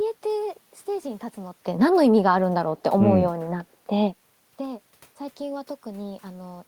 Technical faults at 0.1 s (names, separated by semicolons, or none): none